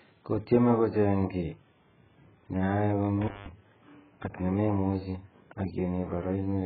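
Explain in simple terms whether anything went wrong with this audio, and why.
The whole recording sounds muffled, dull and watery, with nothing above about 4.5 kHz. That points to heavy AAC compression, likely from squeezing the file very small. Just after "ne ae", from 3.21 to 3.52 s, the sound crackles and briefly cuts out for about 0.19 s. That is an intermittent contact, where a loose cable or plug momentarily breaks the connection.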